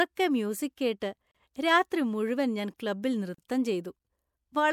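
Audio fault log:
1.31–1.35 s and 3.35–3.38 s: gap at a join of encoded pieces. Silences of about 32 and 38 ms, about 2.0 s apart, mark joins where encoder start delay and end padding were left in. Unlike a dropout, the speech resumes where it stopped, with no lost material.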